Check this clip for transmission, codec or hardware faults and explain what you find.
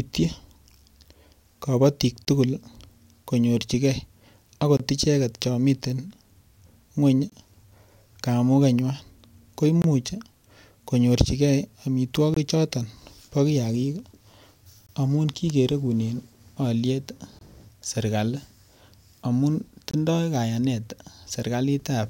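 There's one fault here: a gap between chunks, recurring through the speech.

Short silent holes start at 2.25, 4.77, 7.30, 9.82, 12.34, 14.87, 17.39 and 19.91 s, each about 23 ms long and roughly every 2.5 s. The audio arrives in chunks and each join leaves a short hole.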